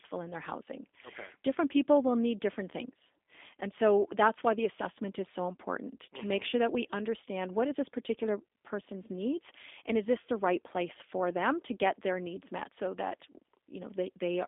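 Speech runs through the G.729 codec for the whole clip. Nothing is heard above about 3.7 kHz. The line band sits near 250 Hz to 3.6 kHz. Coarse pulse-and-filter rebuilding, which fits an 8 kbit/s G.729A stream, leaves the voice plainly rough and synthetic.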